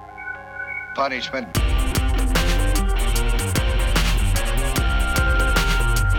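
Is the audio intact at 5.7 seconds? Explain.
No. At 5.7 s, as across the whole clip, mains buzz sits under the sound. Sharp switching spikes, of the kind a dimmer, rectifier or poorly shielded lead lets into the signal path, arrive twice per 50 Hz cycle, so the interference is a dense series of harmonics of 50 Hz extending up into the kilohertz range. It is heard as a steady, raspy buzz, roughly 35 dB below the signal.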